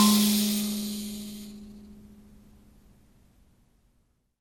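Throughout the music, generation loss: swirly, hollow smearing and blurred attacks exceed what a single MP2 encode near 96 kbit/s gives, likely from around seven re-encodes.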